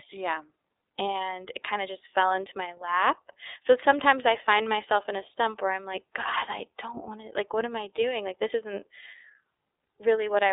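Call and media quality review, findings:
Rough, plainly synthetic speech throughout, nothing above 3.8 kHz, band about 250 Hz–3.7 kHz. iLBC codec coding each frame independently, which fits its 30 ms, 13.33 kbps mode.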